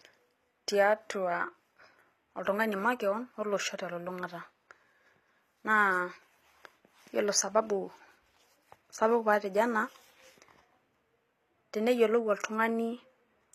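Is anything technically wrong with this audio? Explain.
Yes. Throughout the speech, the treble sounds synthetic, likely from HE-AAC compression rebuilding it by band replication, which fits about 24 kbps. Sibilants turn gritty and metallic; a spectrogram shows smeared, blocky high bands and nothing above 15.5 kHz.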